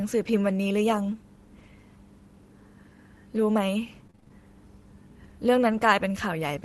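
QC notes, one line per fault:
4.07–4.32 s, repeated packet loss (robotic sound): six short dropouts, the longest 30 ms, each patched by extending the preceding speech. About 120 ms goes missing and roughly half of this 0.24 s stretch is concealment, so the speech turns choppy.
5.72–5.82 s, lost packet rebuilt from error correction: about 60 ms of speech, consistent with three 20 ms Opus frames, is replaced by low-bitrate redundant copies carried in the following packets. There is no gap, but the rebuilt section sounds rougher and noisier than the surrounding speech.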